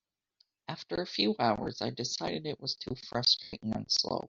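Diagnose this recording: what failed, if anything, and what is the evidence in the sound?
The wireless link dropped audio, causing lost LE Audio frames that the LC3 decoder had to conceal by repeating the last spectrum with randomised phase. Just after "a few" and before "I decided it was", 1.63 to 1.66 s becomes a brief 30 ms noisy smear, consistent with about three lost frames. After "decided it was too", 3.43 to 3.53 s is a 100 ms gap where the smear fades toward silence as concealment decays.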